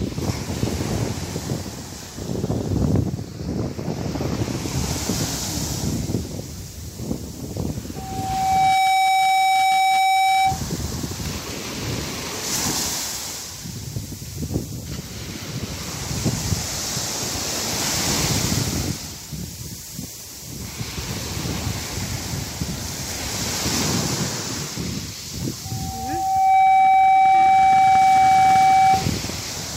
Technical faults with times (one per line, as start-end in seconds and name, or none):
7.96-10.62 loudspeaker feedback squeal
25.65-29.11 loudspeaker feedback squeal